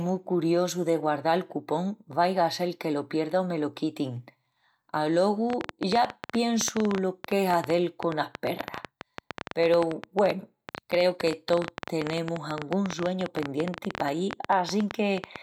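A speech recording with a train of clicks running from 5.50 s to 15.37 s, through to the end of the clip. The clicks arrive at about 11.5 per second with uneven spacing, around a hundred in all. Each is a short, similarly shaped pulse peaking roughly 15 dB above the speech, so the ticking is prominent over the voice and in the pauses. The likely cause is electrical interference from nearby equipment or a faulty connection or power supply injecting repeated pulses into the signal path.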